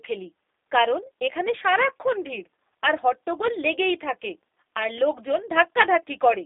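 Speech heard through the G.729 codec for the whole clip: rough, slightly synthetic and band-limited, consistent with 8 kbit/s model-based coding. A spectrogram shows energy confined to roughly 300 Hz to 3.7 kHz, with a hard empty region above 3.8 kHz.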